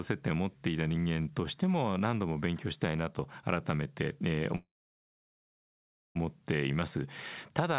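A speech clip with a call audio freeze from 4.56 s to 6.17 s: the last sound carries on and dies away, then roughly 1.5 s of near-silence, and the talk resumes where it stopped, with nothing lost, just 1.6 s of added delay. Likely cause: packets stalled in transit and the jitter buffer ran dry. The band stops at 4 kHz, which fits a G.711 mu-law call path at 64 kbps.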